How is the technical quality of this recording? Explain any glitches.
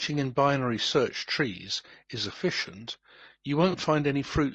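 The recording has plainly audible codec damage throughout, plus one brief dropout near the end.

Low-delay AAC compression runs through the whole speech clip, likely AAC-ELD at a bitrate in the region of 32 kbps. Its short transform frames resolve voice harmonics poorly, so the speech sounds rough and grainy. A spectrogram shows noise smeared between harmonic lines and a thin, synthetic-looking top band.

AAC frame loss with concealment occurs from 3.71 to 3.75 s, consistent with one 20 ms frame going missing. The decoder patched the gap from the last good spectrum, giving a brief smeared, phasey blip. On a spectrogram it appears as a blurred vertical strip, and the waveform loses its crisp detail there.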